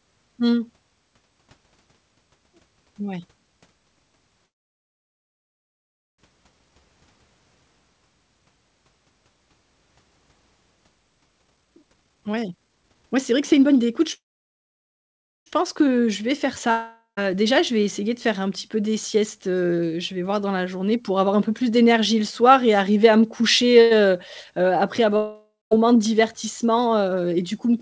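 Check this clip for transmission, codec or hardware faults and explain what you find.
Several delivery faults are audible, all from the call's packet timing and jitter buffer, heard through a G.722 path at 64 kbps with nothing above 8 kHz.

Call audio freeze, 4.46 to 6.20 s and 14.14 to 15.48 s: the last sound fades as a buzz into near-total silence for about 1.7 s and 1.3 s, then resumes exactly where it left off with nothing skipped. The likely cause is held-up packets draining the jitter buffer.

Jitter buffer speed-up, 11.43 to 15.95 s and 26.19 to 27.16 s: an overfull buffer trimmed pitch-period slices to catch up. In the first stretch it runs at 130% speed, shedding about one and a half seconds, so it sounds rushed without any pitch change. The second stretch is a milder 106%, removing well under a tenth of a second.

Long network dropout, 16.71 to 17.19 s and 25.17 to 25.73 s: audio likely never arrived. 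A fading buzzy fill, then brief silence of 0.12 s and 0.21 s, gives way to sound that resumes with about 0.46 s and 0.56 s genuinely gone.

Short stall from a late packet, 23.81 s: one packet missed its slot, so the receiver stretched the last sound for about 96 ms. It is heard as a briefly held moment with a slight buzz or dip and nothing lost.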